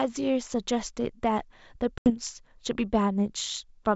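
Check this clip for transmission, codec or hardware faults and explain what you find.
One transmission fault stands out: packet loss on an ADPCM call, from 1.98 to 2.11 s. About 80 ms of audio, a few packets' worth, drops to hard-edged silence. The receiving decoder's predictor and step size then disagree with the sender's, so the sound resumes slightly distorted, settling over some tens of milliseconds. On a waveform this is a flat gap with a jump at its end. On a spectrogram it is a blank vertical band. The wideband coding itself is clean, reaching up to 7 kHz, consistent with G.722 at 64 kbit/s.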